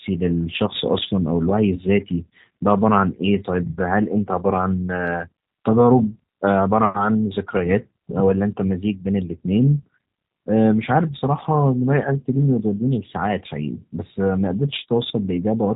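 From the start, the speech carries G.729 codec damage, plainly audible. Nothing above 4 kHz survives. The sound is slightly rough and synthetic, which fits an 8 kbit/s stream.

At 1.76 to 1.81 s comes VoIP packet loss concealed by the speech codec. About 20 ms went missing, which points to one lost packet. The decoder stretched the last sound into a fading buzzy tone or coloured noise, and it stays weak briefly afterward.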